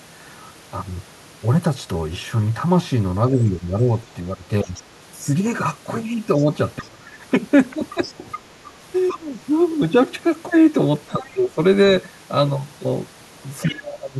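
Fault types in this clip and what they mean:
speech suppressed in double talk: The speech ducks and thins in four stretches, near 3.3 to 4.7 s, 6.4 to 9.3 s, 11.1 to 11.6 s and from 13.7 s to the end. The deepest dip, roughly 25 dB, falls in the longest stretch, and the others sink by around 10 to 20 dB. These are likely the echo canceller turning everything down while both sides talked over each other, because it could not separate the talker from the loudspeaker echo.
other side's voice leaking through: A faint second voice sits under the speech at about 4.7 s, 6.4 to 9.2 s, 11.1 s and 13.6 s. It arrives mostly in brief scraps, with one sustained stretch in the middle. It runs about 15 to 25 dB below the main speech. This is likely the far talker coming out of the loudspeaker and reaching the microphone, where the echo canceller failed to remove all of it, right where the main speech is being pushed down.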